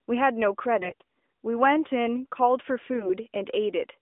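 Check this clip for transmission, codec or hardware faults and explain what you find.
Two short bursts of AMR bit errors, at 0.80 to 1.04 s and 2.94 to 3.11 s, on a narrowband AMR line passing roughly 250 Hz to 3.6 kHz, with light coding damage that fits the 12.2 kbps mode. In both bursts, heavy bit corruption, on the order of one bit in ten, hit the weakly protected parts of each frame while the core check still passed. The excitation pulses landed in the wrong positions and the fine gain, pitch and spectral values drifted. The speech holds its pitch and loudness but turns rough, scratchy and gargling for those moments.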